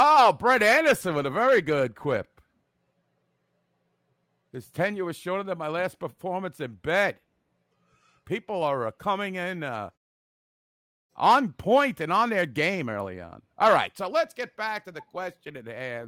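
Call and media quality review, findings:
No faults found in this speech recording. The background fades to silence during pauses and comes back in time for the next phrase, with no speech lost at either edge.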